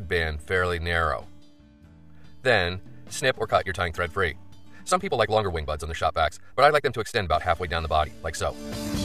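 From 3.15 s to the end, a time-stretched section: the pace abruptly jumps to about 1.77 times normal while pitch holds steady, sounding rushed. This is likely software compressing the audio to a target length, dropping short pieces to preserve pitch.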